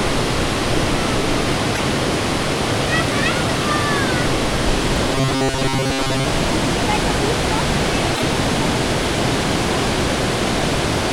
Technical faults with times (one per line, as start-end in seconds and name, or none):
1.74-1.79 repeated frames
5.15-6.25 robotic sound from repeated short buffers
8.14-8.22 repeated frames